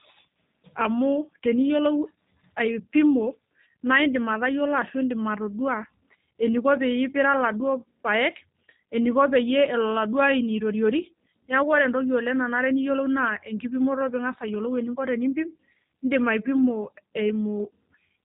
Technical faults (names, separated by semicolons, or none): G.729 codec